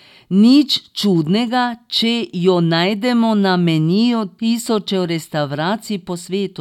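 No technical faults can be heard anywhere in the speech.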